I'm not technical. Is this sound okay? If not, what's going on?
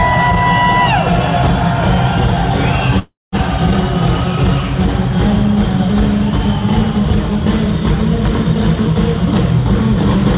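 No. At about 2.99 s the sound stalls for roughly a third of a second, until 3.35 s, with about 0.2 s of it silent. This is a call audio freeze, likely from delayed network data, and nothing is lost, only delayed.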